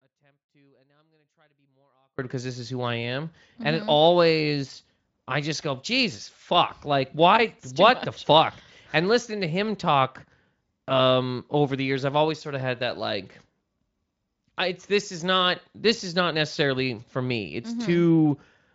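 The clip opens mid-dropout, an audio dropout to a faint residue about 40 dB down until 2.19 s, likely signal loss on a live path, cutting back abruptly at "because this is who".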